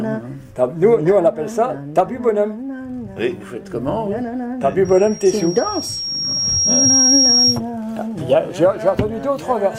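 At 4.85 s a loudspeaker feedback squeal begins and lasts until 7.61 s. A microphone is picking up the loudspeaker it drives, and at 5.6 kHz the loop gain passes one, so that frequency feeds on itself. It swells over roughly two seconds to sit about 5 dB above the program. The slow, self-reinforcing build is what separates it from a steady interference whistle, which would arrive at full level.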